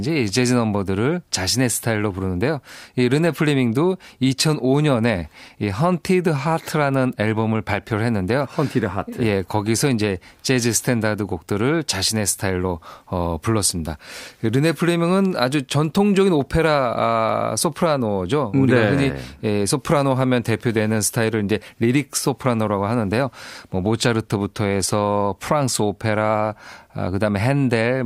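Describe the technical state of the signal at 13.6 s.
At 13.6 s the speech signal is intact, with no audible dropout, distortion, glitch or other technical fault at that moment.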